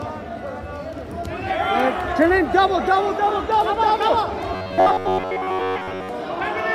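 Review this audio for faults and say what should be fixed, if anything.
From 4.53 to 6.09 s there is robotic sound from repeated short buffers, a rigid metallic buzz at 93.8 Hz, likely from repeating about 10.7 ms blocks in place of most incoming audio. Prevent it by enlarging the jitter buffer so audio arrives steadily.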